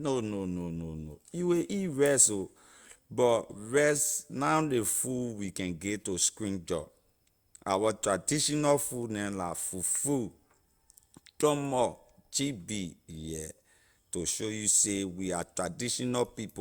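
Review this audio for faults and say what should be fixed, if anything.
Nothing here needs fixing, since no faults turn up anywhere in the recording.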